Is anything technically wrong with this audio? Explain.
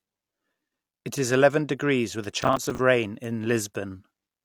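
Yes. At 2.24 s, just after "is eleven degrees with", a bit error spike sounds. One flipped bit makes a single sample jump and return, heard as a sharp tick. A second single-sample tick falls at 3.24 s.

From 2.42 to 2.79 s, processor overload crackle tears through the speech. The processor misses about fifteen roughly 10 ms buffer deadlines over that stretch. Each gap is filled with stale audio, giving gritty crackle.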